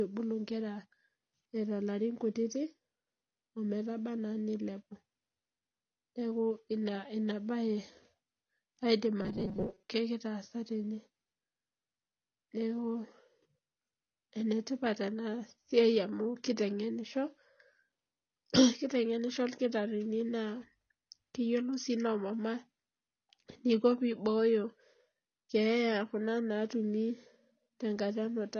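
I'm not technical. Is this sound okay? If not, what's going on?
No. Throughout the speech the sound is dull, and the damage is plainly audible. The likely cause is AAC compression squeezed too hard. Unlike a simply muffled microphone, it also adds a smeared, fizzy texture to hissy sounds.

From 9.22 to 9.90 s the voice turns into a rigid, metallic buzz at a fixed pitch of 188 Hz, likely robotic sound from repeated short buffers. About half the audio there is tiny repeated slices. Unlike a dropout, the sound never goes silent.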